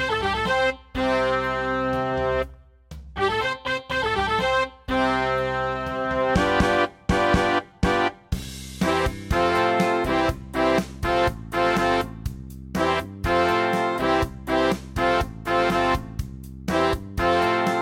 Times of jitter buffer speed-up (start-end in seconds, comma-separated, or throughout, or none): none